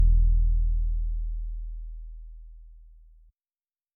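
No technical faults can be heard anywhere in this clip.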